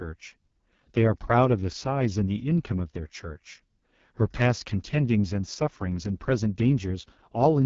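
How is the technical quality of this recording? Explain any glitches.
The technical quality is poor, with one fault present for the whole clip. The speech has been through the AMR wideband (HD Voice) codec. It sounds rough and raspy, which fits AMR-WB's lowest 6.6 kbit/s mode. The codec models the vocal tract with sparse pulses and substitutes shaped noise for the top band. Here that coarse modelling causes heavy damage, and there is no content above about 7.2 kHz.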